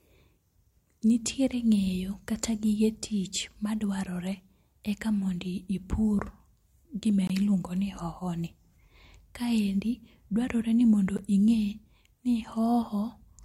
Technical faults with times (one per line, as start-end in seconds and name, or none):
7.27-7.30 block of digital silence
11.17 block of digital silence